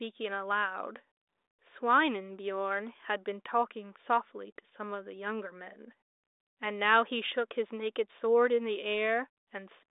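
No faults are audible in the speech, which sits in a telephone band of about 300 Hz to 3.7 kHz with nothing above 3.8 kHz, consistent with G.726 ADPCM at 40 kbit/s.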